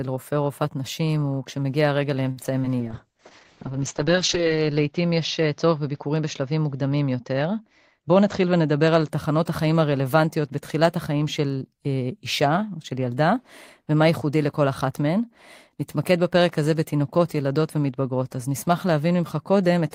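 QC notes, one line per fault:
2.31–2.39 s, short stall from a late packet: a packet turned up late and the jitter buffer ran dry, so the receiver held the last bit of sound for about 54 ms until it arrived, then picked up right where it left off. Nothing's lost, but that moment drags a touch too long, with a faint buzzy or dipped quality to it, and the playback delay grows by the same 54 ms.
2.43–2.46 s, short concealed packet loss: about 20 ms of the speech never made it to the decoder, and the receiver covered roughly 12 ms of the gap by extending the previous sound, using its pitch if voiced or shaped noise if not, before blending back into the real signal. It comes across as a quick smear or wobble, and a brief consonant in there could be swallowed.
2.81–9.16 s, call bitrate drop: the bandwidth estimate dropped and the encoder went from 32 kbps down to 7 kbps, sitting at the bottom for about 1.7 s. 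With so few bits the coding gets coarse, and the audio band shrinks from 20 kHz to 8 kHz, so the speech sounds muffled and a bit rough or watery through that stretch until the rate climbs back.
7.98–8.30 s, jitter buffer speed-up: the buffer was holding more audio than its target, so the receiver trimmed lots of tiny pitch-period-sized chunks in a row, around 50 ms in total. Playback runs at about 115% speed over that third of a second with the pitch unchanged, so the speech sounds hurried there. It lands inside the low-bitrate stretch, so both effects stack.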